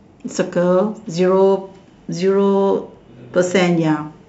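No technical faults can be heard anywhere in the speech. No dropouts, clicks, distortion, pitch or timing problems occur at any point.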